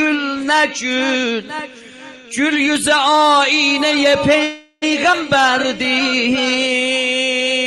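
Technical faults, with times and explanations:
4.43 to 4.84 s, call audio freeze: the last sound is drawn out for about 0.39 s as a fading buzz, never going fully silent, then resumes where it stopped with nothing lost. The likely cause is delayed packets draining the jitter buffer.
5.12 to 5.15 s, skip ahead: playback jumps forward abruptly, and roughly a tenth of a second of audio is missing. The two sides are butted together with only a tiny fill. A stretch was dropped while later packets were already queued.
6.31 to 7.55 s, jitter buffer slow-down: this stretch plays at 94% speed with unchanged pitch, sounding slightly dragged and stretched. The buffer was low, so the receiver repeated short pitch periods, inserting 81 ms in total to rebuild its reserve.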